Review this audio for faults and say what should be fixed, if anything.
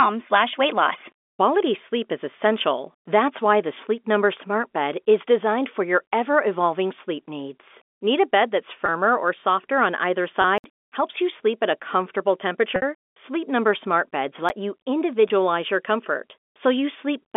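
Packet loss with pitch repetition occurs four times: at 8.86–8.88 s, just after "bed that's" and before "or softer on either"; at 10.42–10.44 s, right after "or softer on either"; at 12.76–12.82 s; and at 15.28–15.30 s. The three 20 ms losses sound like a briefly held, buzzy tone, which fits single 20 ms packets going missing. The 60 ms loss at 12.76 s lasts long enough for the repeated cycle to start fading. On a spectrogram, each one shows as a stretch of frozen, evenly spaced harmonics. In the waveform, one pitch cycle is copied several times. Better jitter buffering, or forward error correction on the link, would cover these losses.

Blocks of digital silence occur at 10.58–10.64 s, still after "or softer on either", and at 14.49 s. The first is a 60 ms hole. The second, about 11 ms long, sounds more like a tick. Both cut out and back with no fade. The waveform shows a flat line with vertical steps at each end, and a spectrogram shows a black gap bordered by thin broadband stripes. 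These point to the output buffer running dry, so the audio thread needs more buffer headroom or a higher scheduling priority. The G.711 telephone coding, with its band of roughly 250 Hz to 3.5 kHz, is working normally.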